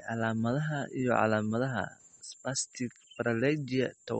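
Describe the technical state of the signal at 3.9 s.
At 3.9 s the speech carries the same damage heard across the whole clip, most likely from MP3 compression. Nothing sounds above 8.4 kHz, and the codec damage is plainly audible. That fits a starved bitrate around 32 kbps, where the encoder cuts the treble and drops weak frequency lines that flicker between frames. The result is watery, swirling sibilance and smeared onsets, which is what separates it from a simple low-pass filter that would only sound dull.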